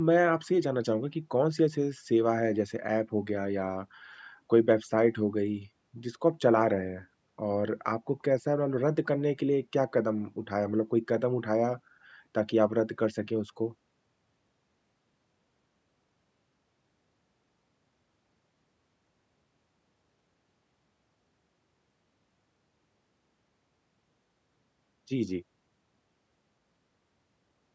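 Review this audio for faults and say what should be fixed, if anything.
Nothing in this audio needs to be fixed, as no faults turn up.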